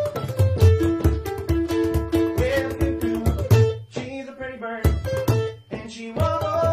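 Damaged data in a compressed stream at 3.39 to 3.45 s: corrupted frames throw the decoder out of sync, producing a brief glitch as it hunts for the next header.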